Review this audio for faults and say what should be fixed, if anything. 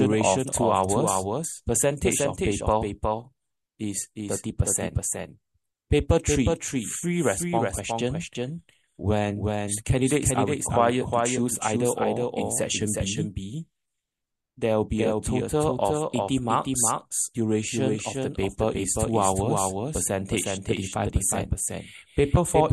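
Doubled audio track, present from start to end: every sound is followed by a second, full-band copy arriving roughly 0.4 s later and around 5 dB quieter. The copy has no decay or room colour, so it reads as a clean repeat rather than an echo. The likely cause is the same source being captured twice, once through a slower path, or an edit leaving two copies out of step. Removing the delayed copy fixes it. To prevent it, route each source through a single capture path and check for stray parallel feeds before recording.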